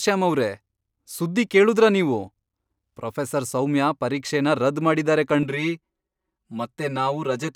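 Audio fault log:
5.43–7.55 s, channel delay (comb filtering): from 5.43 s to the end, the speech turns hollow and phasey. One channel arrives late by roughly 5 ms, and when the pair is summed to mono the shared sound cancels at evenly spaced frequencies. The first notch falls near 100 Hz, with further notches repeating up the spectrum. These fixed gaps carve away parts of the tone and cause the hollowness.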